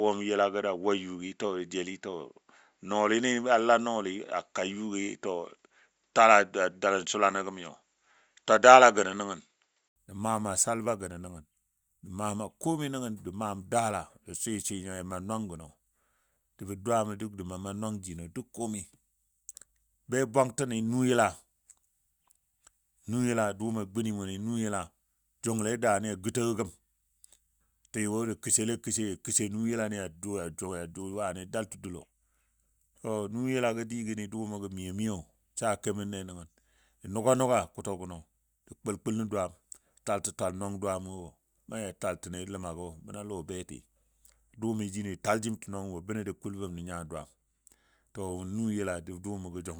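From 0 to 9.96 s the input was likely switched to a poorer device, one that passes nothing above 7.6 kHz and adds its own faint noise floor. The speech sounds dull and boxy at a level about 5 dB different, then clears after a brief 80 ms silence.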